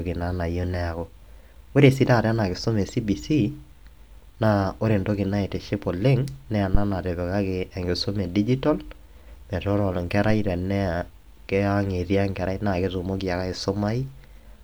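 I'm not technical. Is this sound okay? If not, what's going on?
No, there's a phantom power thump at about 6.75 to 6.86 s: someone switched the mic's power on or off on the live input, causing a short, deep bump.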